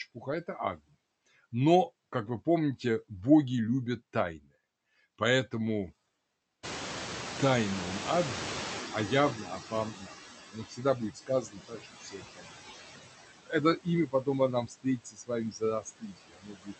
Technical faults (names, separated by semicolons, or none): noise suppressor artifacts; noise suppressor catching up; speech cut by the noise suppressor